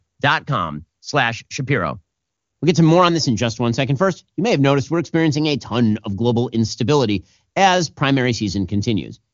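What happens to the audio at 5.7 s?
Nothing goes wrong at 5.7 s; the speech there passes intact through the AMR wideband (HD Voice) codec, which is running at a high enough rate that its coding leaves at most a faint trace.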